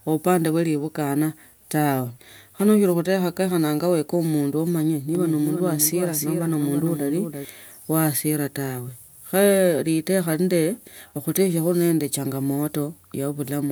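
A doubled audio track appears from 5.15 to 7.45 s: a somewhat quieter copy trails by roughly 300 ms, likely from a slower capture path.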